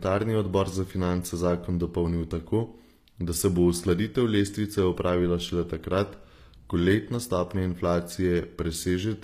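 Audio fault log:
throughout HE-AAC compression: the speech was likely coded with HE-AAC at a low bitrate, around 24 kbps, so only the lower spectrum was kept and the treble was rebuilt from copied lower bands. Plainly audible: s sounds turn gritty and lispy, and upper harmonics don't line up.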